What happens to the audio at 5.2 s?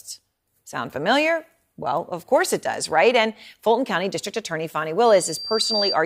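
Loudspeaker feedback squeal runs from 5.05 to 5.97 s, so at 5.2 s it is just starting. A microphone is picking up the loudspeaker it drives, and at 4.7 kHz the loop's gain exceeds one, so that frequency keeps amplifying itself on each trip around. It is heard as a thin, piercing tone that swells over most of a second until it is about as loud as the speech, then holds as a sharp whistle.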